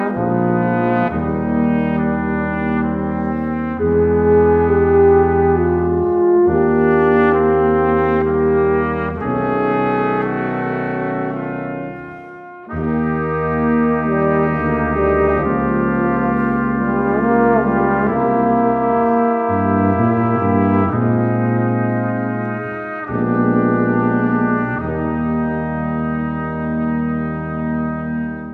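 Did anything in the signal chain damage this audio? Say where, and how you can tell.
No, nothing along the way seems to have hurt this one; I can't hear any point in the chain where something went wrong.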